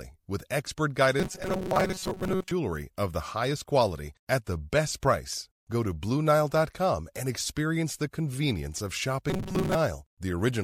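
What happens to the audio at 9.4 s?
From 9.30 to 9.75 s, robotic sound from repeated short buffers: a rigid, metallic 188 Hz buzz, likely from looping roughly 5 ms fragments when new audio arrived late.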